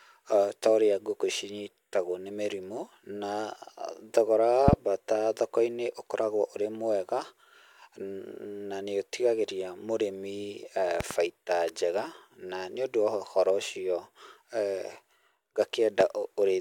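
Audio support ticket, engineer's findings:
Loud pop, 4.68–4.75 s: double pop, peak about 20 dB above the speech, which continues underneath. Likely a voltage step from a plug, switch or static discharge. On the waveform, two tall spikes. On the spectrogram, two full-band vertical lines.
Loud pop, 11.01–11.13 s: double pop, about 15 dB above the signal. Same signature, likely a switch or connector transient.
Loud pop, 16.01–16.03 s: single thump, about 20 dB up, one broadband stripe. Likely a driver glitch.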